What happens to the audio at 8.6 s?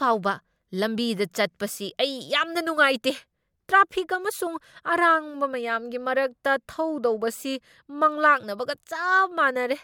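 Nothing goes wrong at 8.6 s; the speech there plays through intact, with no dropout, click, distortion or other fault.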